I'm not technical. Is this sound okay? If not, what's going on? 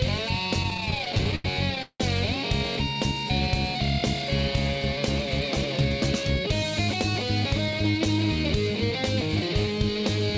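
No. From 0.63 to 2.01 s the audio stutters and drags, catching and repeating itself in short hiccups, with the longest hold at 175 ms. These are repeated stalls (stutter). Bits of the audio kept arriving late over the connection, so the player ran out 19 times and filled each gap by stretching the last sound until more arrived. About a third of that stretch is filled-in sound, but nothing is actually lost.

From 5.4 to 6.13 s the audio briefly sounds rushed, running about 8 percent fast while the pitch stays the same. This is a jitter buffer speed-up. The player had stored more audio than it wanted, so it quietly trimmed many tiny slivers, totalling roughly 70 ms, to catch up. Throughout, the call link (G.722) keeps the sound dull, with nothing above 8 kHz.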